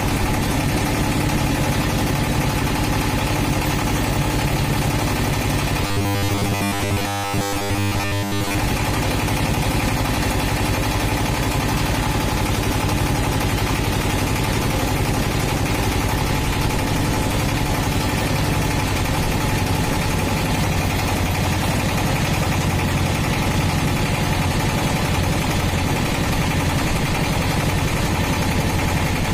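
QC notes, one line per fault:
5.87–8.58 s, robotic sound from repeated short buffers: the sound becomes a rigid metallic buzz at 100 Hz, which fits a 10 ms chunk replayed over and over, likely from audio arriving too slowly, with most of the real material skipped. Unlike steady hum, the buzz loosely tracks the underlying sound.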